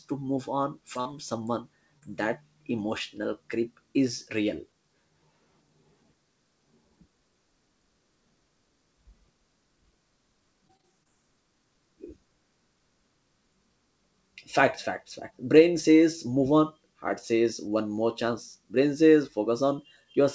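Right after "to move on", the call loses short stretches of audio to late or missing packets. This is short concealed packet loss at 0.94–0.97 s and again at 1.01–1.07 s. The receiver patches each hole by extending the preceding sound and then fading back into the real signal. The result is a quick smear and wobble just before "someone that emotional creep". A third patch at 1.99–2.04 s, before "that emotional creep is", leaves a similar brief blur.

From 10.68 to 11.07 s the losses repeat: four separate gaps, the longest about 22 ms, together about 80 ms. Roughly a fifth of that span is synthesized rather than received. This is repeated packet loss, and it produces a robotic sound. Each fill is soon followed by the next hole, so the audio turns choppy, with fragments missing. Throughout, the wideband call path carries nothing above 8 kHz.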